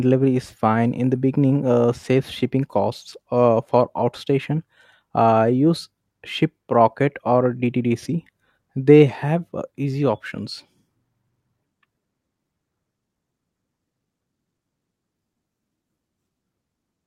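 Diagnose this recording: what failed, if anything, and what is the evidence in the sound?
Nothing failed here as far as I can hear; the recording holds steady from its first moment to its last, with no stage in the chain giving itself away.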